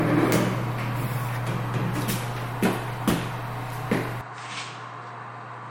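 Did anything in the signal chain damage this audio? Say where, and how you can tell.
Yes. At the codec stage, the low-bitrate coding artefacts persist throughout, though content reaches up to 21.4 kHz. This pattern likely points to low-bitrate audio saved at a high bitrate, a 60 kbit/s MP3 re-encoded at 192 kbit/s. The second pass preserves the damage but cannot undo it.

At the driver or device level, an input switched to a poorer device at 4.21 s with no gap. From there to the end, nothing appears above 8.7 kHz, the level drops about 10 dB, and a new noise floor sits roughly 50 dB down. These are the likely marks of a narrower-band input.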